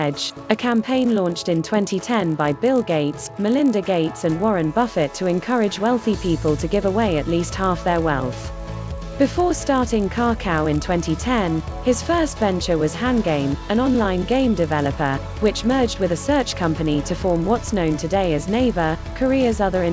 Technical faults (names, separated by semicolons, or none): resampler restarted on every block